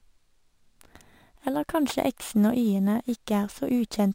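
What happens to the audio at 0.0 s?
From the very start, the speech carries imaging from sample-and-hold upsampling, and it runs through the whole clip. The audio was raised from 24 kHz to 48 kHz by repeating each sample, with no smoothing filter. That leaves a mirrored copy of the spectrum between 12 kHz and 24 kHz, about 26 dB below the speech. It is heard as a bright, metallic fizz. Its level rises and falls with the speech.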